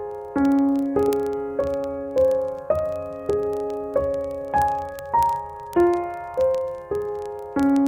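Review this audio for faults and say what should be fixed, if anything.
Word clock ticks, 0.11 to 7.87 s: the receiving device free-runs about 700 ppm off the sender, slipping one sample roughly every 30 ms, around 200 ticks through the music.

Lock the receiver to the incoming digital signal's clock, or feed both devices from one shared word clock.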